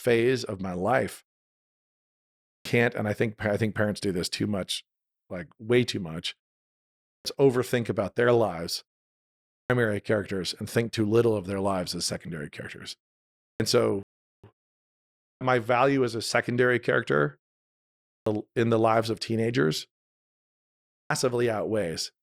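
At 1.49 s a rebuffering stall halts playback for 0.54 s. The player ran dry and then resumed where it stopped, so the waveform shows a flat, empty gap with nothing lost.

Clipped starts after a pause follow at 2.29, 6.89, 9.33, 13.24, 15.05, 17.89 and 20.74 s. Each time the output device is waking from silence and swallows about 0.36 s, so speech bursts in abruptly. The spectrogram shows energy appearing suddenly at full level, with no onset.

A second stall at 14.03 s adds 0.41 s of flat silence.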